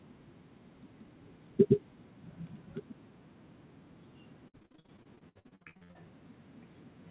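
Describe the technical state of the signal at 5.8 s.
Repeated packet loss (robotic sound) runs from 4.48 to 5.97 s: the speech is chopped by brief gaps up to 64 ms, about half concealed by extending the previous sound, giving a choppy quality with pieces missing.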